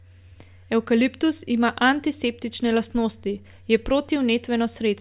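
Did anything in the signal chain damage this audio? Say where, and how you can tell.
No, nothing in the signal chain stood out as having damaged this speech when listening through it.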